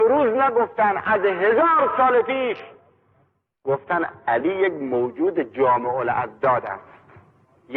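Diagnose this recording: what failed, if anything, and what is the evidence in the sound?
From 1.58 to 4.67 s the treble dulls and gritty noise rises: a Bluetooth SBC bit pool drop at the codec stage, consistent with a congested link starving the upper sub-bands.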